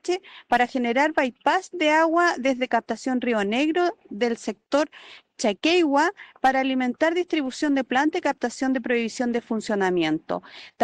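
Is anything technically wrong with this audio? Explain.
No, nothing technically wrong stood out on listening to this audio.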